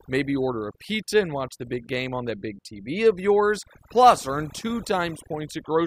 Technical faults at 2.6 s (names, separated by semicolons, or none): overdone noise removal